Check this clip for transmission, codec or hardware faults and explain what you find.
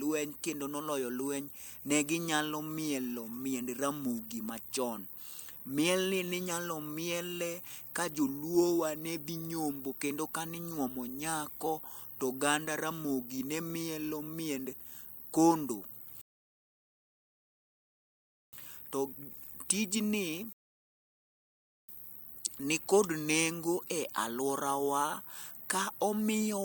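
Two rebuffering stalls interrupt the speech: silence from 16.21 to 18.53 s (about 2.3 s) and from 20.53 to 21.89 s (about 1.4 s). Each time the speech picks up exactly where it stopped, because the player exhausted its downloaded audio and waited for more.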